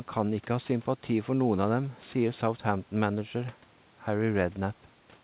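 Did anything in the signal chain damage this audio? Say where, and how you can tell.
No, nothing in the chain has damaged this speech. The call path's G.711 A-law coding at 64 kbps leaves no energy above 4 kHz, and the room noise sits about 33 dB below the voice.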